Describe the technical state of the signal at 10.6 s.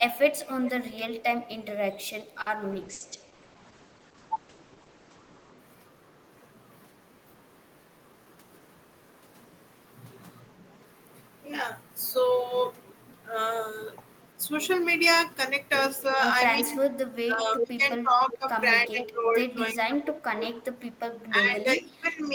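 The signal at 10.6 s is intact, with no audible fault at that moment.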